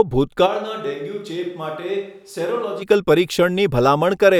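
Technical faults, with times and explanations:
0.48–2.81 s, switch to a distant microphone: the speech abruptly turns roomy, hollow and bass-light, drops roughly 10 dB with more room noise, then snaps back. The close mic likely dropped out.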